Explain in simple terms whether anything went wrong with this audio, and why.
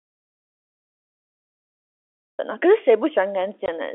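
The clip opens in total silence, with no background hiss at all, until the speech starts at 2.39 s. This is an audio dropout to silence: the input was likely lost, so only silence was recorded. Near the end, from 3.66 to 3.68 s, the speech has a tiny hole. This is packet loss filled with silence, where a single 20 ms chunk of the phone-line audio went missing and silence played instead.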